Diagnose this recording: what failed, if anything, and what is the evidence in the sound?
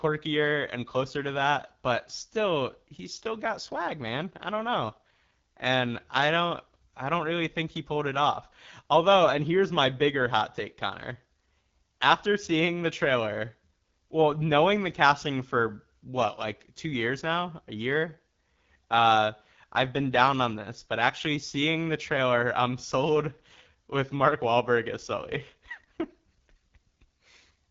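Rough, raspy speech throughout, with nothing above 7.5 kHz: codec stage, an AMR wideband (HD Voice) codec whose coarse pulse coding fits 8.85 kbit/s.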